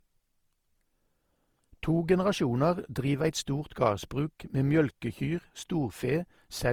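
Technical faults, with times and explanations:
throughout, generation loss: the speech sounds swirly, hollow and smeared, with blurred consonant onsets, worse than one pass of what sounds like 48 kbit/s Opus would give. It's likely been encoded about five times, each pass re-quantising on a shifted frame grid, so noise piles up.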